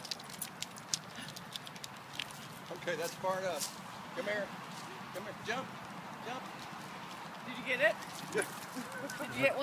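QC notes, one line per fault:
No faults heard anywhere in the clip; nothing to log.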